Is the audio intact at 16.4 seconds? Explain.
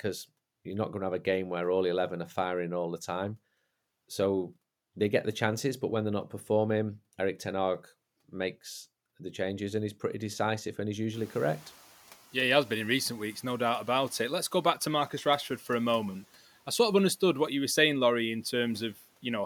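Yes, the audio is intact at 16.4 seconds; the only thing heard there besides the speech is the room's own background noise, sitting about 27 dB below the speech, which belongs to the recording rather than being a fault.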